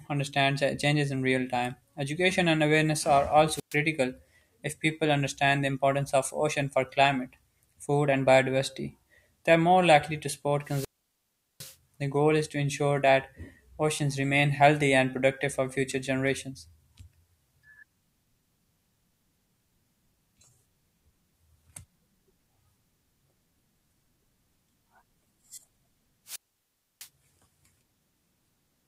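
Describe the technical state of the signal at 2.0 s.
At 2.0 s the speech signal is intact, with no audible fault at that moment.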